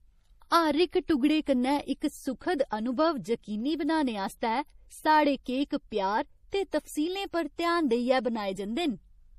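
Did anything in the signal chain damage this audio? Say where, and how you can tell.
Yes, codec stage: throughout, the speech sounds watery, with nothing above 15.2 kHz. Likely MP3 compression, fitting roughly 40 kbps, zeroing weak frequency lines.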